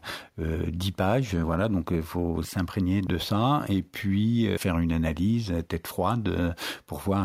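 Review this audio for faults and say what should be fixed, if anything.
No faults found; nothing needs fixing.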